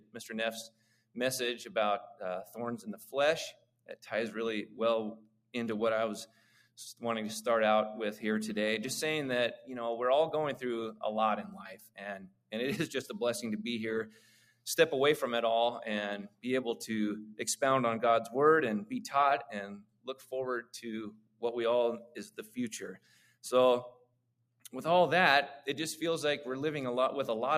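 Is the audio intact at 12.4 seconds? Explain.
No. Between 10.92 and 12.53 s, covering 12.4 s, there is sound cut by the noise suppressor: it judged the sustained sound to be noise and pulled it down by up to about 21 dB, for roughly a second in total. On the waveform the envelope collapses after each onset, and on the spectrogram the held partials and decay fade into dark gaps.

Underneath this, a noise suppressor applied to music or sounds is active across the whole clip, swinging its attenuation by around 15 dB. Attacks pass while steady tones and tails get pushed down, so the sound pumps and thins. On the waveform the level breathes unevenly, and on the spectrogram sustained bands flicker and reverb tails are trimmed short.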